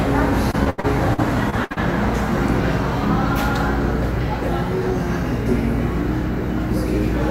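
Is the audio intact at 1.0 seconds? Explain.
No. Repeated packet loss runs from 0.51 to 1.78 s: eight gaps, the longest 81 ms, are patched by extending the preceding sound, giving choppy, robotic audio.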